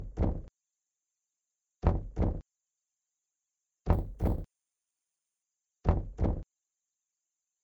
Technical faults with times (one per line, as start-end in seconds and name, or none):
3.93-5.43 imaging from sample-and-hold upsampling